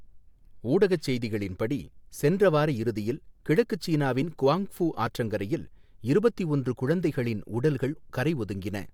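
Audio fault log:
Nothing to flag here; I listened to the whole speech clip and didn't catch a single glitch worth logging.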